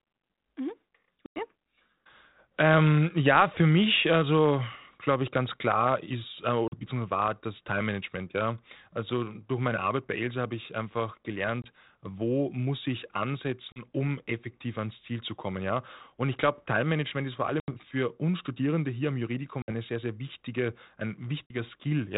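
Packet loss on an ADPCM call occurs at 1.26–1.45 s, 6.68–6.74 s, 11.62–11.65 s, 13.72–13.82 s, 17.60–17.69 s, 19.62–19.72 s and 21.46–21.54 s, with holes of 100, 40, 20, 40, 80, 60 and 40 ms. Silence replaces the missing audio, so each gap starts and ends hard-edged. The decoder's adaptive predictor and step size lose step with the sender's, so the speech comes back slightly distorted, before settling over tens of milliseconds. Underneath, the narrowband G.726 sound shows light codec damage, which fits the 32 kbit/s rate used by cordless phones.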